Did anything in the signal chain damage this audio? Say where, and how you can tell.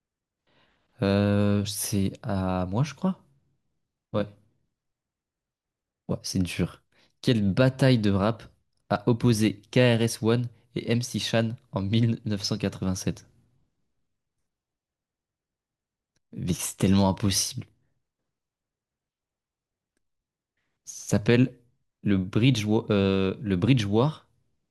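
No, nothing in the signal chain damaged this audio, so there is no stage to point to.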